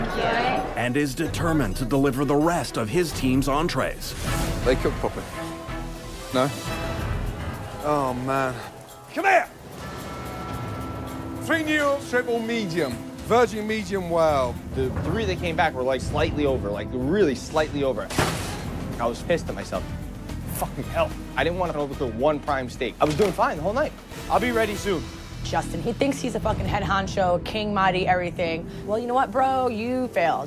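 No technical faults can be heard anywhere in this audio; the signal stays steady and intact throughout, with no breaks, distortion or disturbances in playback.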